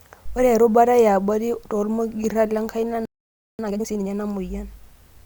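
At 3.05 s the speech cuts off mid-flow and the output goes completely silent until 3.59 s, a gap of about 0.54 s. This is a playback stall, most likely the player running short of buffered data or its audio thread being blocked. On a waveform it shows as an abrupt drop to a flat line with no decay tail. A spectrogram shows a clean vertical edge followed by an empty band across all frequencies.

From 3.59 to 4.11 s the player works off the backlog with time-compressed catch-up. The speech plays at twice its normal rate while keeping its natural pitch. To do this, short segments are dropped and the remaining pieces are cross-faded together, which makes the delivery sound hurried. Harmonic lines on a spectrogram stay at the same frequencies but look squeezed horizontally, with small discontinuities at the splice points. The waveform's syllable envelopes look packed closer together.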